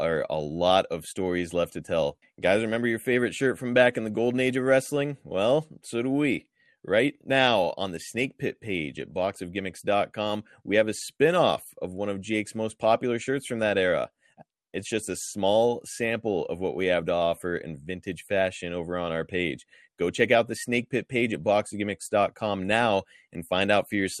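MP2 compression, throughout: the speech sounds dull and gurgling, likely from MPEG Layer II starving its upper sub-bands of bits, which fits a low bitrate around 80 kbps.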